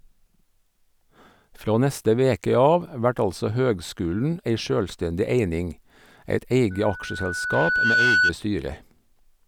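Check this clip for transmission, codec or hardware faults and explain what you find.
One fault is present: loudspeaker feedback squeal from 6.70 to 8.33 s. A microphone is picking up the loudspeaker it feeds, and at 1.5 kHz the loop gain exceeds one, so that frequency reinforces itself on every pass. The tone swells over roughly a second and a half until it sits a few decibels above the speech. On a spectrogram it shows as a single bright horizontal line that thickens. The waveform's envelope climbs steadily across that span.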